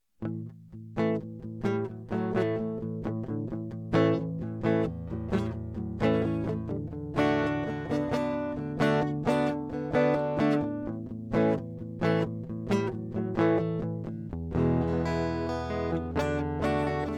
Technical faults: none

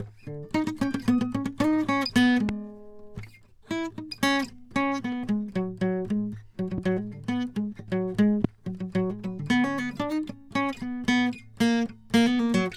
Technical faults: loud pop; CD scratch ticks

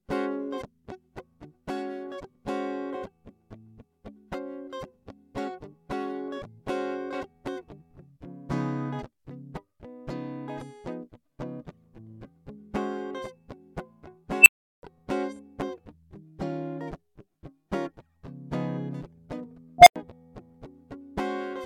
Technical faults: unstable filter

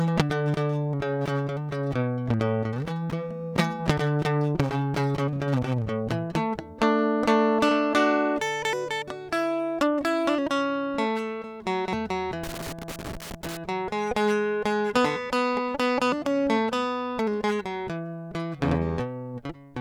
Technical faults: loose connector crackle

